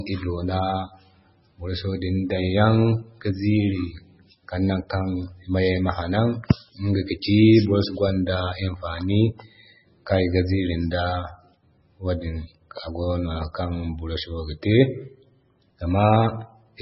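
Likely MP3 compression affects the speech throughout, heavy enough to fit a very low bitrate near 16 kbps. Short of bits, the encoder removes everything above 5.6 kHz and zeroes faint frequency detail frame by frame, leaving dull, watery, swirling speech with smeared attacks.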